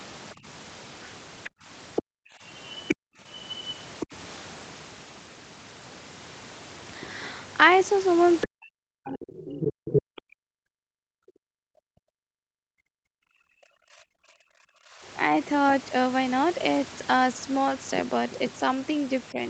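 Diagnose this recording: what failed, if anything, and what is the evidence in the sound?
Speech suppressed in double talk, at the call-processing stage: the speech dips at 0.35–0.46 s by about 10 dB, then falls by up to about 40 dB within 1.48–4.13 s and 8.44–15.07 s. On the waveform the deeper drops show as gouged, near-flat gaps, and on the spectrogram as blanked columns. The likely cause is an echo canceller muting the near talker while the far side speaks.

Other side's voice leaking through, also in call processing: a second voice appears at 1.44–2.95 s about 5 dB below the speech, briefly at 4.0–4.06 s about 10 dB down, and at 8.41–10.01 s roughly level with it. On the spectrogram, overlapping harmonic stacks show likely residual loudspeaker echo left uncancelled in the microphone signal.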